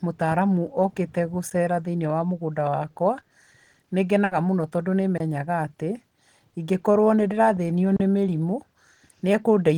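A speech recording with two kinds of dropout. Blocks of digital silence hit at 1.50 s, between "mũtaaramu okĩte" and "thĩiniĩ wa mũgũnda wakwa", then at 5.18 to 5.20 s, and at 7.96 to 8.00 s, before "nĩ mĩrimũ". The audio cuts out and back with no fade. The first, about 12 ms, fits a missed 512-sample buffer. The second fits a 1024-sample one. The third lasts about 35 ms. A burst of packet loss runs from 4.24 to 4.32 s, just before "mũno tongũ". The receiver stretches the last sound for about 70 ms as a fading buzz or hiss. Another 70 ms of speech is simply gone when playback resumes.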